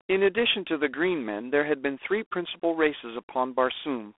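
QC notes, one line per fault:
Throughout, G.726 ADPCM: the speech has been squeezed through a telephone-band adaptive differential codec, coding each sample as a coarse few-bit difference from a running prediction. The level-tracking rasp points to the 24 kbit/s mode. That plainly audible quantisation error rides on the speech as a harsh, gritty hiss that swells and fades with loudness. The band is narrowed to roughly 300 Hz to 3.5 kHz, with nothing above 3.8 kHz.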